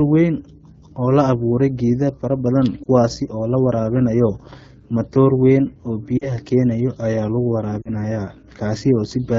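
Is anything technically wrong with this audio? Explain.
Yes. Two faults are audible in this speech clip.

Throughout, the audio carries the character of the AMR wideband (HD Voice) codec at a low rate, consistent with about 8.85 kbit/s. The codec models speech up to 6.4 kHz with a pulse-excited vocal tract filter and fills 6.4 to 7 kHz with shaped noise. At a rate this low, the model can't track the voice finely, so the speech sounds plainly rough and raspy.

Lost AMR speech frames cause three short disruptions. At 2.83 to 2.88 s, between "awuure geeda fara badan" and "oo la waraabinayo", a brief dip or warble fits a single lost 20 ms frame. At 6.17 to 6.33 s, after "matoor weyn oo" and before "keenayao ayaa lagu", and again at 7.81 to 7.90 s, just after "keenayao ayaa lagu", the gaps suggest two consecutive lost frames each. The decoder concealed them by repeating the last good pitch and vocal tract settings with falling gain. 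The sound smears and quickly fades, then resumes weak or rough.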